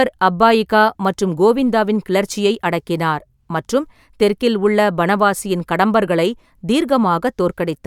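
No technical faults are audible.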